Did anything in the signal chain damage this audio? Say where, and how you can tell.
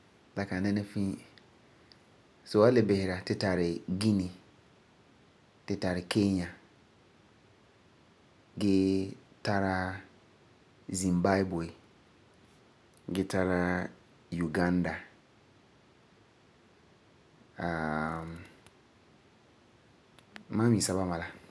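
No, nothing in the signal chain has damaged this speech recording. No stage from capture through to playback leaves an audible mark on it.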